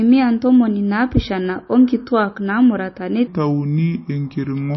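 Speech runs throughout with nothing above 5.8 kHz and a watery, swirling texture, consistent with heavy MP3 compression, likely at a low bitrate near 27 kbps rather than a simple low-pass filter. From 3.27 s to the end, a section at the wrong speed plays at 0.741 times its pace, dropping about five semitones. Because pitch and tempo fall together, this is likely a playback-speed fault rather than a pitch shift.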